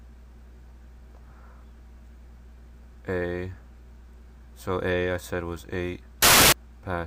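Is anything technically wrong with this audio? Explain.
Yes. From 6.22 to 6.52 s, samples are built from the wrong bytes. Low bits become the loud part. It bursts into harsh broadband noise.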